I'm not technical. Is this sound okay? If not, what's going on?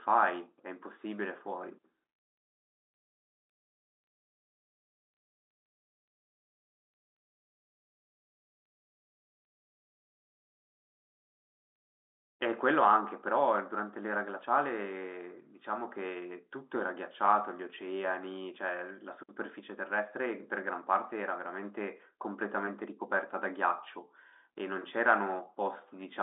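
Yes, this sound is okay; it has the slightly narrow tone of an ordinary phone line, but nothing is going wrong.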